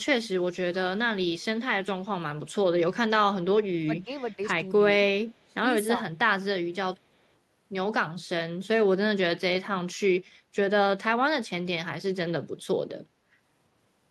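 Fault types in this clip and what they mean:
speech suppressed in double talk: The speech drops by about 20 dB from 3.8 to 4.39 s and about 25 dB from 5.42 to 5.66 s, likely an echo canceller turning down its talker during overlap. The waveform pinches inward and the spectrogram fades to faint patches.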